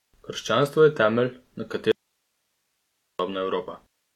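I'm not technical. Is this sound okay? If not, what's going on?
No. The speech cuts out suddenly at 1.92 s and returns at 3.19 s, leaving about 1.3 seconds of only a very faint hiss. This is an audio dropout to a faint residue, likely a brief break in the signal while the equipment after the break stayed switched on.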